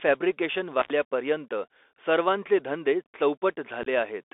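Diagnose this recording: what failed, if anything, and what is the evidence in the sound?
The whole speech clip sounds thin and boxed-in, with a granular hiss beneath it and scratchy, gritty s sounds. Everything sits between about 300 Hz and 3.6 kHz. That points to the codec stage: the Bluetooth CVSD headset codec, running on what fits a 64 kbit/s link. CVSD codes one up-or-down bit per sample with an adapting step size. Loud high-frequency energy outruns that step and distorts, and nothing above the narrow telephone band survives.

From 0.80 to 0.90 s the sound drops out for about 86 ms, with a crackle at each edge and only faint hiss during the gap. This is an intermittent contact in the analogue wiring. A loose plug or cable momentarily opened the circuit, so the signal vanished and the contact noise made the crackles as it broke and reconnected. This is not a digital dropout.

Between 3.83 and 3.88 s the speech breaks into short, hard-edged holes that sound rough and chopped. 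About 26 ms is missing across a 30 ms span, and the longest single gap is 15 ms. This is unconcealed Bluetooth headset packet loss on the wireless link. Several short voice packets went missing and were replaced by silence rather than concealed, so each hole starts and stops abruptly. The CVSD decoder then recovers at a briefly lower level.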